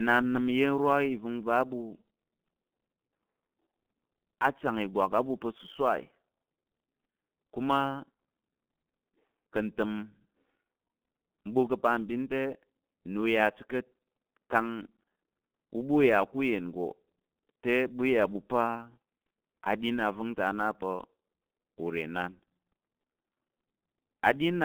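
Speech runs through a G.723.1 codec for the whole clip. Nothing is heard above 3.5 kHz, and the band sits between 150 Hz and 3.4 kHz. The voice is muffled and hoarse, and consonants blur. The damage is heavy, which fits a rate near 6.3 kbit/s. Sample clock jitter is also present throughout. The converter samples a few microseconds early or late at random. This adds a rough hiss roughly 35 dB below the signal. It grows on loud, bright passages and disappears in pauses.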